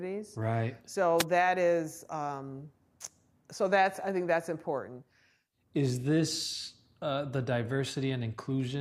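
A short burst of static cuts across the speech from 1.18 to 1.25 s, just before "that is um". This is a wireless microphone noise hit: the analogue FM radio link faded as reflected signals cancelled, letting receiver noise rise for 70 ms.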